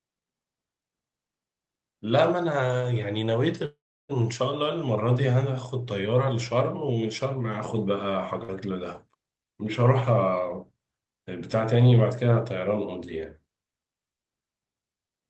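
Speech heard through a call path with content ending near 8 kHz shows a call audio freeze at 3.65–4.11 s, likely from packets held up on the network: the last sound smears into a fading buzz, then about 0.33 s of flat silence, leaving a blank block on the spectrogram before speech resumes intact. A short stall from a late packet at 8.43–8.50 s holds one sound about 52 ms too long, visible as a briefly stretched, steady band. From 12.67 to 13.47 s a jitter buffer speed-up trims short pitch-period pieces, around 50 ms in total, so speech runs about 4% faster at unchanged pitch, with some whole pitch cycles dropped from the waveform.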